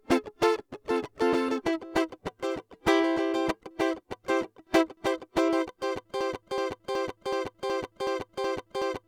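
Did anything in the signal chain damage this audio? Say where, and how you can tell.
Yes. A broken-record loop starts at 6.21 s and runs to the end of the music: a 0.37 s fragment repeats exactly, back to back, eight times. The stage is likely the playback buffer, which stalled and kept resending its last fragment, so the intended audio is lost.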